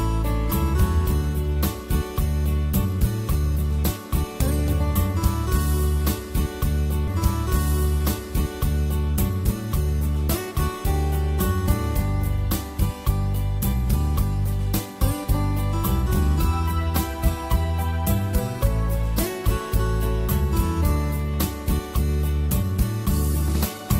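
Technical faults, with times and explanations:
7.07 to 9.07 s, stream segment repeated: the player queued the same two-second chunk of the stream a second time, so that stretch of audio plays again in full, adding 2 s to the programme, with a small blip where playback jumps back to repeat it.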